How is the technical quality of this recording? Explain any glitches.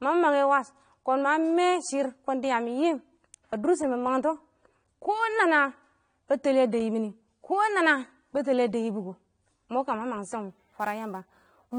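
The recording is compromised by two audible faults: coarse compression throughout and a rough, hissy patch in the final second or so.

Throughout, the speech sounds dull and smeared, with nothing above 9.7 kHz and a warbling, fizzy edge on sibilants, most likely from AAC compression at a low bitrate, which fits roughly 32 kbps. Unlike simple low-pass filtering, the coder also leaves spectral holes that make the texture swirl.

From 10.50 s to 11.78 s, sample clock jitter adds a grainy hiss. The converter's timing wanders by around ten microseconds, so the error tracks the waveform's slope, sitting roughly 25 dB below the signal. Unlike steady background noise, it swells on loud, bright sounds and disappears in pauses.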